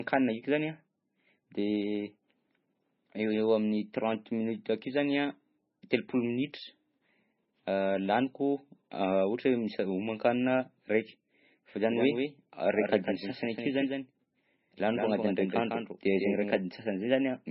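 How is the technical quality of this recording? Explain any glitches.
The technical quality is poor: heavy compression damage runs through the whole recording, and a second copy of the speech is briefly mixed in late in the clip.

MP3 compression affects the entire clip and is the likely cause of the dull, watery sound. Nothing is present above 5.6 kHz, which fits a very low bitrate, somewhere under 20 kbps. With so few bits, the encoder cuts the treble and drops weak frequency lines from frame to frame. S sounds turn swirly and metallic, and consonant attacks smear. On a spectrogram, the energy ends at a flat ceiling near 5.6 kHz, and the region below is patchy and speckled.

A doubled audio track runs from 11.89 s to 16.57 s. A full-band copy of the speech trails the original by around 150 ms at about 5 dB quieter, which gives a hollow, slapback-like doubling without any room decay. This is likely from a second capture path or a misaligned edit holding two copies. 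It begins and ends abruptly. A waveform shows each syllable followed closely by a smaller twin, and a spectrogram shows the same patterns repeated a short step to the right.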